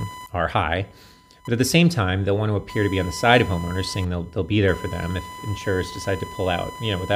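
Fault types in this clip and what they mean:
computer activity noise: Processor, graphics or mouse load currents disturb the ground the audio circuit shares, coupling interference into the signal. Here it runs throughout the speech as a buzz pulsing at roughly 1 kHz, about 20 dB below the speech, following the computer's load, not the talking.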